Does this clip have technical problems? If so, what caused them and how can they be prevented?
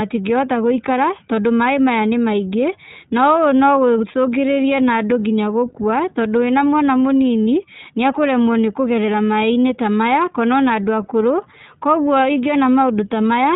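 Yes. The speech carries iLBC codec damage throughout: a narrowband, slightly rough, synthetic quality, with each 20 ms frame coded on its own, which fits the 15.2 kbps mode. A spectrogram shows nothing above 4 kHz. Prevent it with a wideband codec.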